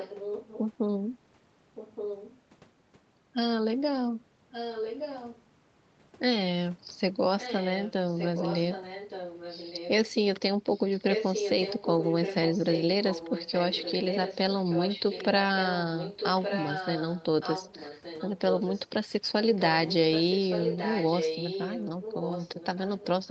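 Speech carries an echo leak. A delayed copy of the voice returns about 1.17 s late at 0–0.6, 1.75–2.41, 4.51–5.42, 7.38–9.9, 10.69–15.26, 15.57–18.88 and 19.56–23.31 s. It sits about 10 dB below the speech, or about 5 dB below during 10.69–15.26 s. The likely cause is a speakerphone whose echo canceller let its microphone pickup through.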